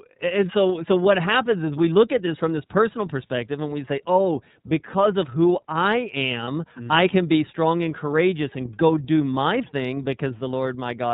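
A speech recording carried through the iLBC codec, whose damage is plainly audible for the whole clip. The band stops at 4 kHz, so everything above is missing and the sound is muffled and telephone-like. Each frame's excitation is coded on its own, leaving the voice slightly rough and synthetic; the texture fits the 13.33 kbps mode with 30 ms frames. At 6.44 to 6.48 s, between "because of who i" and "mm i can be", there are lost iLBC frames. The gap fits a single dropped 30 ms frame. The decoder conceals it by repeating the last pitch cycle with added noise, so the moment sounds like a briefly held, faintly buzzy vowel rather than a silence. Because iLBC frames decode independently, the voice returns to normal immediately after the gap.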